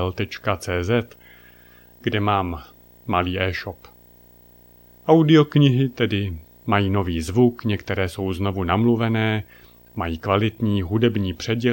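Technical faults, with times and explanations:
Throughout: video or display buzz. A screen or video cable is coupling into the audio path, adding a buzz at the 59.94 Hz field rate with hash above it and a thin 15.7 kHz line-rate whine, sitting roughly 30 dB below the speech.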